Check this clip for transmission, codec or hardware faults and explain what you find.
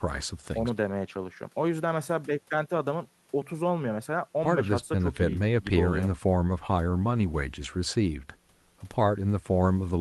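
Nothing stood out on listening; the speech comes through without any audible problem.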